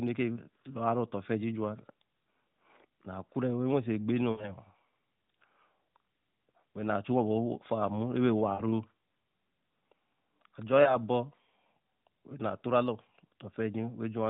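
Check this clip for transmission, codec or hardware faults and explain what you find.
Lost AMR speech frames occur at 0.34–0.38 s, 4.32–4.51 s (just after "halt so ekpe"), 8.54–8.62 s and 10.84–10.97 s. Corrupted frames fail their checksum, so the decoder fills each gap by repeating the last good pitch and vocal-tract settings at falling gain. The 20 ms gaps at 0.34 s and 10.84 s are brief dips. At 8.54 s, 40 ms of smeared sound is heard. After "halt so ekpe", 60 ms of sound is stretched and fades before the speech recovers.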